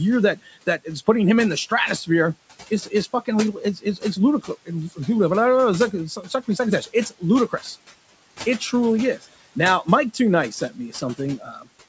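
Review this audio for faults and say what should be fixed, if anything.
Noise suppressor artifacts run through the whole clip. The suppressor pulls the room noise down by about 18 dB in pauses and lets it back up under speech.

Speech cut by the noise suppressor occurs at 0.36–1.08 s, just before "him in the stratosphere", and at 3.76–4.03 s, 4.42–4.99 s, 5.91–7.76 s and 10.51–11.67 s. Quiet parts were treated as noise. Brief stretches drop by about 10 to 16 dB, so soft sounds go faint.

Lowering the suppressor's strength, or giving it a slower, more speech-aware gain response, would prevent both faults.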